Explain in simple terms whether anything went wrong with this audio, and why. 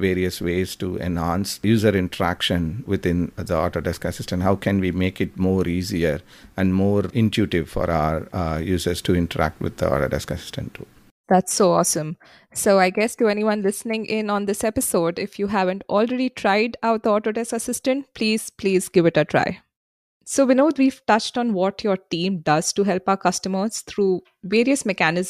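Nothing went wrong with this speech recording that a listener would notice. At no point does the sound stop, jump or change in a way that points to a technical problem.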